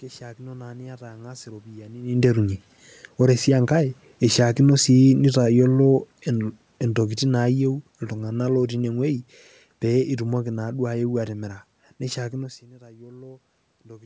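From 3.18 s, right after "iropiyiani ninterunye", automatic gain falling sets in. The gain control judged the input too loud or its background noise too strong and eased its gain down over about six seconds, ending near 9.34 s roughly 7 dB lower. What separates this from a talker leaning away, which also happens near 2 s and 12.5 s, is that the room noise sinks along with the voice, because the whole signal is being turned down.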